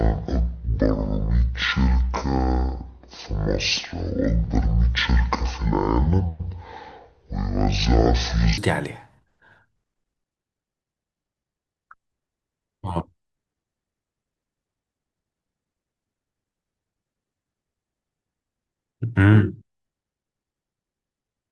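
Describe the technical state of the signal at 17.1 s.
At 17.1 s the speech signal is intact, with no dropout, clipping, glitch or other fault audible at that point.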